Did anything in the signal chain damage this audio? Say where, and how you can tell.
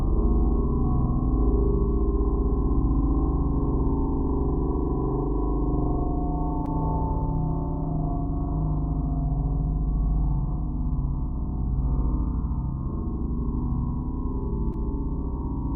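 Yes: short concealed packet loss on the network at 6.65–6.69 s and 14.73–14.83 s. Each 20 ms hole was filled with continued sound, a brief smear rather than a silent dropout.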